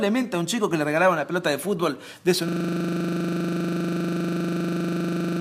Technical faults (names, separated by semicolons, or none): system hang loop